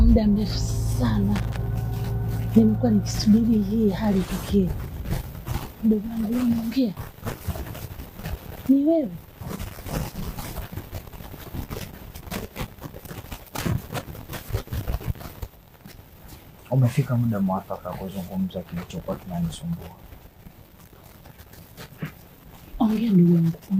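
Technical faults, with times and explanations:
1.36–1.57 s and 13.84–13.93 s, loose connector crackle: two short, ragged bursts of scratchy crackle, the first about a fifth of a second long and the second under a tenth. That's a worn or dirty contact making and breaking as something nudges it. Each time the connection drops out the signal gets chopped into fragments, and any DC sitting on the line turns those breaks into little pops, which is why the bursts sound so uneven.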